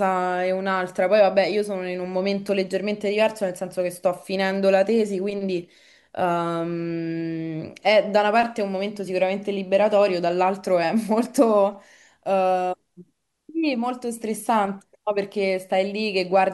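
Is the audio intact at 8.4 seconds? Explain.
Yes, the audio is intact at 8.4 seconds, with no dropout, glitch or other fault at that point.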